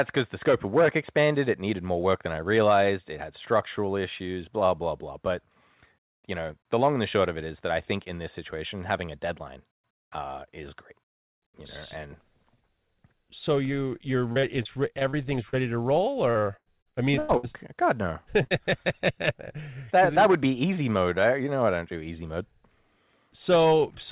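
Right after "so you you're", from 14.32 to 15.55 s, there's repeated packet loss (the robotic sound). Six short gaps, the longest about 38 ms, get patched by stretching the previous sound, so roughly 14% of that stretch is filler and it goes choppy. It happens again from 16.31 to 17.45 s, just after "to roll", and it's worse: seven gaps, one about 97 ms long, with nearly a third of the span concealed.

Then there's a short concealed packet loss at 18.43 to 18.53 s, which is two back-to-back holes of roughly 20 ms and 40 ms. The receiver carried the last sound forward and blended it back in, so you hear a quick smear or wobble. Everything rides on narrowband G.711 with nothing above 4 kHz.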